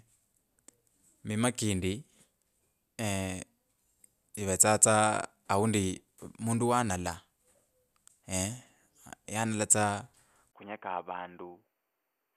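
Speech clip, and at 10.51 s there's a 20 ms gap, then everything above 3.2 kHz vanishes, the level falls roughly 10 dB and a faint new noise floor appears through to the end. That's most likely the input switched to a poorer device.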